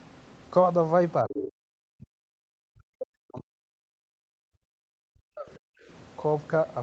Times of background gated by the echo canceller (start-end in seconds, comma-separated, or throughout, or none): 5.80-5.87